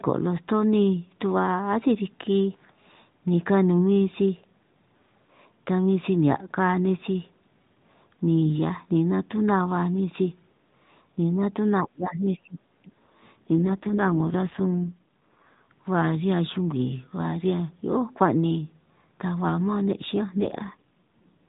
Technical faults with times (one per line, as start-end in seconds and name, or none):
11.72-12.90 speech suppressed in double talk
13.59-15.67 AMR rate drop
20.30-21.47 AMR rate drop